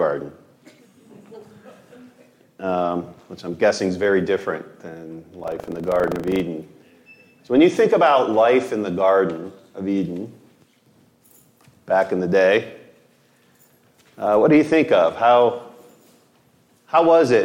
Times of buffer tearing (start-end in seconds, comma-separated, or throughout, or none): 5.36-6.44